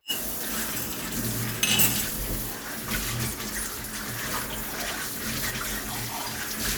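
No technical faults can be heard in this audio.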